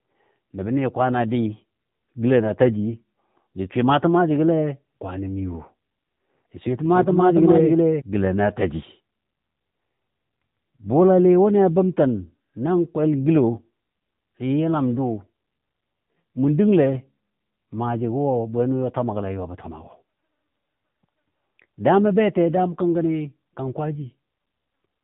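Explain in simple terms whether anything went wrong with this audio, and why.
The whole recording went through the AMR narrowband mobile codec, the old phone-call speech format. Everything above about 3.8 kHz is gone, so the voice sounds thin and boxy, and the squeezed data leaves it clearly buzzy and a bit synthetic throughout.

From 6.83 to 8.01 s there's a doubled audio track: a second copy of the speech, just as loud, trails about a third of a second behind and cuts in and out abruptly. It's likely the same sound captured again through a slower path.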